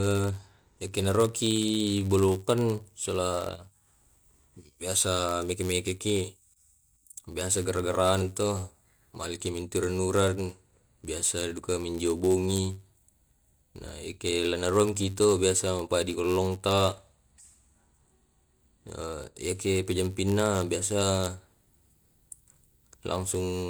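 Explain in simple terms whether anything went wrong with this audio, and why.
A block size mismatch (padded) runs through the whole clip: one stage passes on slightly shorter chunks than the next expects, filling each gap with silence. This adds a steady 91.5 Hz buzz under the speech and slows it by 0.4%, without changing the voice's timbre.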